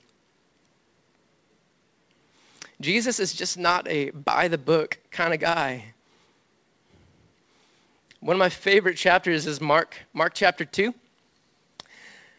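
Clock drift between sender and receiver runs through the whole speech clip, with the sender's clock running around four percent fast. Because samples arrive quicker than they're played out, the jitter buffer keeps swelling instead of holding a steady level.

From about 0.10 s to 12.34 s you get the repeated timing corrections that follow from that. The receiver keeps trimming short slivers to catch up, so playback sits at about 103% speed, with small, unevenly spaced cuts. The call path itself stops at 8 kHz, which fits a wideband G.722 codec.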